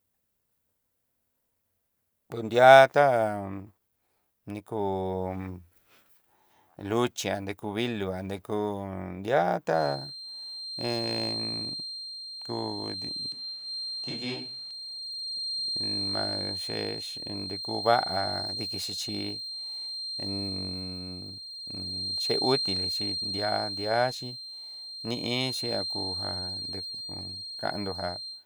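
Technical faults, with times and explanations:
9.71 to 28.46 s, feedback whistle: a thin tone at 4.2 kHz appears at 9.71 s and continues to the end of the clip, sitting only a little below the speech level. This is likely a loudspeaker-to-microphone loop held just short of runaway feedback. That single frequency gets enough gain around the loop to keep ringing on its own, but not enough to grow into a full howl, so it hangs behind the speech as a fixed-pitch whistle.
13.32 to 14.71 s, switch to a distant microphone: for about 1.4 s the speech abruptly turns roomy and hollow, with less bass and room noise roughly 30 dB below the speech, then snaps back just as suddenly. The overall level stays about the same across both changes. The cause is likely that the close microphone dropped out and a farther pickup took over. The distant microphone captures more reflected sound and less of the direct low end, which explains the roomy, hollow sound and the added background noise.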